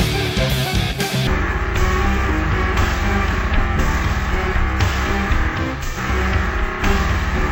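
From 1.27 s to the end, stereo read as mono: interleaved samples run as one channel, halving speed and dropping pitch an octave, unlike resampling, which adds no high mirror image.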